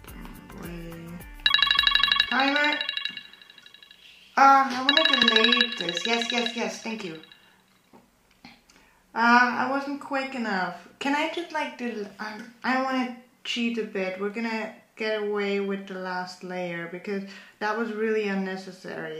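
At 5.23 s there is an abrupt jump in the sound, and at 17.61 s a second, smaller one. Each points to a likely dropped buffer (overrun): the samples were overwritten before being collected, so about 20 ms and then about 10 ms of audio vanish and the two edges butt together. Unlike a dropout, no silence or gap is heard. The sound simply skips forward.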